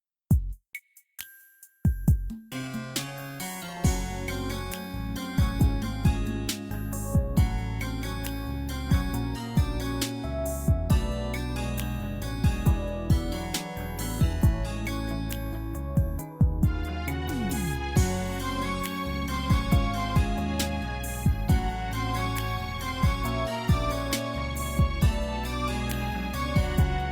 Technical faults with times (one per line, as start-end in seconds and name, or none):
none